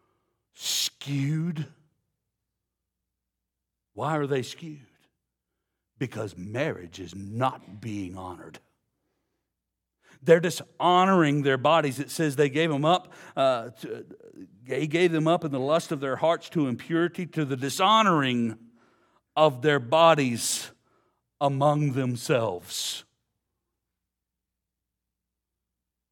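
Speech recording with no technical faults to report; the signal holds steady and intact throughout.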